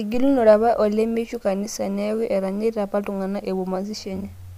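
Nothing in this stretch of speech catches the ear as a technical fault; it just runs along without any glitch or hiccup worth pointing out.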